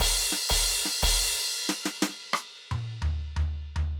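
Dropped samples at 0.90, 2.58 and 3.42 s: each is a single sharp click in the music, a thin vertical line across the spectrum. The cause is likely a fraction of a millisecond of the stream going missing, so the waveform jumps abruptly to a later value.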